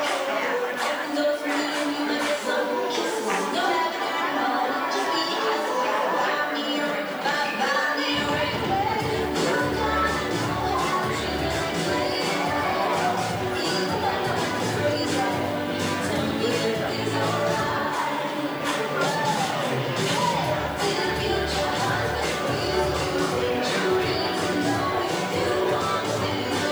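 From start to end, the audio is held at low bit depth with noise shaping: only 8 bits, with the rounding error pushed upward in frequency. The result is a steady, thin hiss roughly 30 dB below the signal, climbing sharply toward the top of the band.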